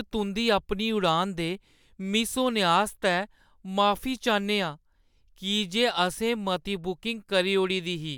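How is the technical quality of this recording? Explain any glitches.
Nothing to flag here, since the speech recording runs along without a single glitch to my ear.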